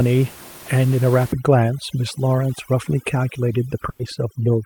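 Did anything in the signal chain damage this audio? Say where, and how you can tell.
Yes, two things. From 1.32 s to the end, call processing applies overdone noise removal. The room noise, about 18 dB below the speech, drops and breaks up into twinkling specks. Quiet speech bands get switched off too.

On the network side, a burst of packet loss hits from 3.89 to 4.01 s. The receiver stretches the last sound for about 100 ms, fading it as a held buzz or hiss. Then it jumps ahead, and roughly 100 ms of speech is simply gone.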